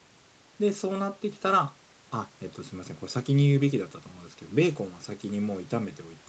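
No technical faults can be heard in this speech clip.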